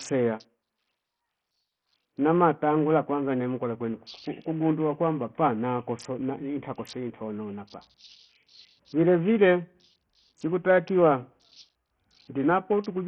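Throughout the speech, treble flickers in and out over a gritty, aliased haze, likely from Bluetooth SBC compression at a very low bit pool starving its upper sub-bands.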